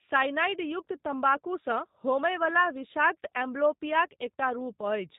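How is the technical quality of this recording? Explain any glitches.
The recording is noticeably degraded by low-bitrate voice coding across the whole clip. G.729 codec damage runs throughout: the speech is rebuilt from a vocal tract filter, a pitch predictor and a few pulses per frame, which fits an 8 kbit/s VoIP link. Nothing above 4 kHz survives, so the speech sounds muffled and slightly rough and synthetic, though still intelligible.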